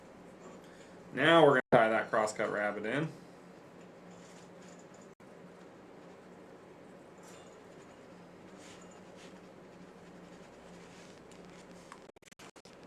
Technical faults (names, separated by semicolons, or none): Bluetooth dropout; train of clicks